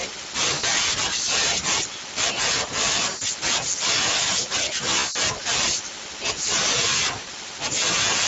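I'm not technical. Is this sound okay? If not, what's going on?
No. The whole clip runs through the Speex codec, an older voice-chat compressor, so the speech sounds rough and hoarse throughout. There's also VoIP packet loss concealed by the speech codec at about 0.53, 3.09, 4.99 and 7.19 seconds: small chunks of audio went missing, and the decoder filled each gap with a fading buzzy or noisy smear.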